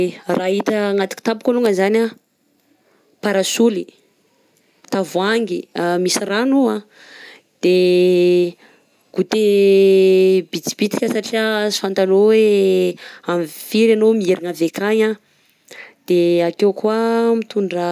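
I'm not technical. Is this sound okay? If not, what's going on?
Yes, this sound is okay; nothing is going wrong with it.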